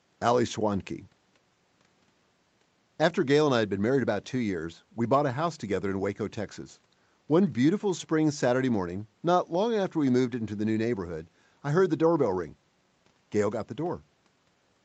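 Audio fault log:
Nothing's wrong with this speech, which comes through the way a typical call does, with the microphone processing and the call path's codec keeping it to nothing above about 8 kHz.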